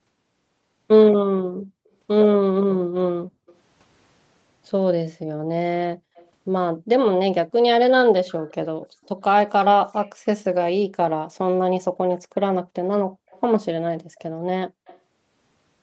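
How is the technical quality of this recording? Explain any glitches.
The recording is call-quality speech with two recurring faults: the background is briefly gated out twice, and a faint delayed echo surfaces five times. The audio stops at 8 kHz, which is the normal bandwidth of the call path and not a fault.

Background gated by the echo canceller, 2.81–3.47 s and 12.63–13.16 s. Each time, the room tone is pulled down by as much as about 40 dB for a fraction of a second. The canceller treated the far-end playback as a reason to clamp the microphone hard, and it released afterward. The ambience drops to near-silence and then returns. On a waveform, the noise floor collapses into a flat trough. On a spectrogram, the background haze vanishes as a dark vertical band.

Echo leak at 3.47–3.55 s, 6.15–6.28 s, 8.28–9.09 s, 13.30–13.41 s and 14.86–14.99 s. A faint copy of the speech trails the original by 178 ms. 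It sits roughly 30 dB below the speech, and somewhat lower in the first instance. Most instances are brief scraps, but the one at 8.28–9.09 s runs longer. The likely cause is a far-end loudspeaker whose echo canceller let residual pickup through. On a spectrogram, this appears as a weak ghost of the harmonic striations shifted 178 ms later. On a waveform, it shows as low-level ripples in what should be gaps.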